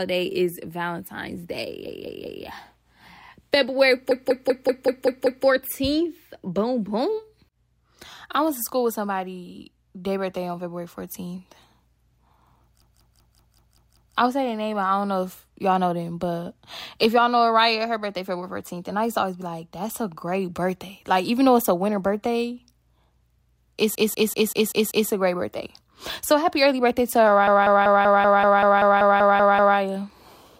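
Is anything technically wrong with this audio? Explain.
Yes. The speech has repeated frames at five points, where a 192 ms block, which fits six compressed frames, was decoded again and again:

1.87–2.45 s, three extra plays
4.11–5.46 s, seven extra plays
12.82–14.16 s, before "I would say their", seven extra plays
23.95–25.10 s, before "a great birthday", six extra plays
27.47–29.78 s, after "happy early birthday to", twelve extra plays

Each is heard as a rhythmic stutter of the same fragment, and together they lengthen the clip by 6.72 s.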